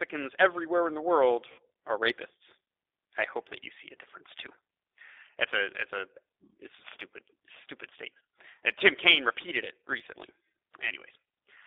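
Throughout the speech, the G.729 codec is plainly audible. The line is band-limited to roughly 300 Hz–3.7 kHz, so the low body and all the sibilant air above that are gone. At 8 kbit/s the voice is rebuilt from a vocal-tract filter, a pitch predictor and a sparse set of pulses per frame rather than from the waveform itself, which gives it a rough, slightly synthetic edge, consistent with the G.729A variant.

From 1.52 to 1.60 s, between "everywhere in the world" and "are rapists", there is VoIP packet loss concealed by the speech codec. About 60 ms of audio is missing, which fits three consecutive 20 ms packets. The decoder fills the gap by repeating its last pitch and filter state at falling gain, so the sound smears and fades, and the voice stays weak or distorted for a moment after speech resumes.

A second, shorter concealment occurs from 6.28 to 6.30 s, after "a it's a" and before "it's a stupid stupid". 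Here only 20 ms is lost, consistent with a single packet. The extrapolated frame produces a brief smeared blip rather than a clear dropout.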